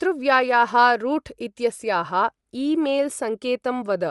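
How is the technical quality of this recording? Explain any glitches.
The speech carries plainly audible codec damage from start to finish. Throughout, the upper band sounds breathy and grainy, likely Bluetooth LC3 compression zeroing treble and filling it with noise, consistent with short 7.5 ms frames near 48 kbps; unlike MP3 swirl, it stays hissy, not warbling.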